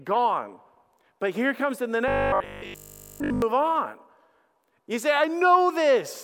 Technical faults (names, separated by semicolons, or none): robotic sound from repeated short buffers